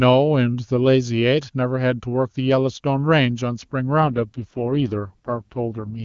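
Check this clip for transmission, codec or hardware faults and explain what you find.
One transmission fault is present: an AMR rate drop from 4.00 s to 6.03 s. The speech is carried by the AMR wideband (HD Voice) codec, which sounds clear up to that point. At 4.00 s the coding rate falls, with quality consistent with a step from 23.85 kbit/s down to 6.6 kbit/s, the lowest wideband mode. With so few bits, the codec's pulse-driven vocal tract model captures the speech only coarsely, so the voice turns rough, raspy and synthetic. The bandwidth stays the same and there is no gap, and the degraded sound continues to the end of the clip.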